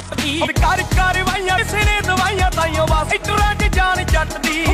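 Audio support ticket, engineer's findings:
Compressed frames skipped at 0.42 s, 1.54 s and 3.07 s. Audio jumps forward, losing roughly 0.3 s at the first and about half a second at each of the others. Decoder or file side: whole frames of about 46 ms missing or rejected as damaged. Unlike a dropout or buffer click, there is no silent gap, and the material resumes later than it should.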